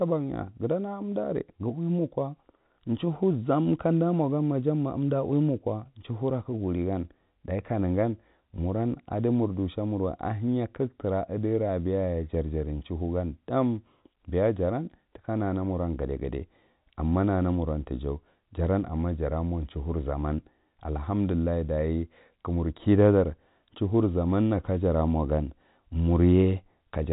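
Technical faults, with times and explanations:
No technical faults are present.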